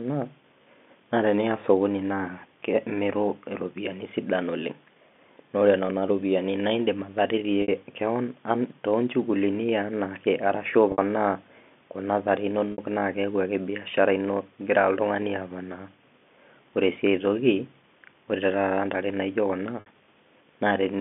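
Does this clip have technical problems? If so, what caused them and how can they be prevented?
Yes. At 7.62, 10.92, 12.72 and 19.80 s, the speech briefly sticks on a buzzy held tone for 60 ms. This is packet loss with pitch repetition, where the receiver loops the last pitch period to cover each missing stretch. Forward error correction or a more reliable network path would prevent it.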